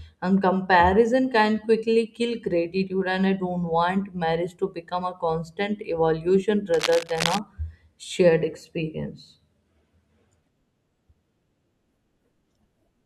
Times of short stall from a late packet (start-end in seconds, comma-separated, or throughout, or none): none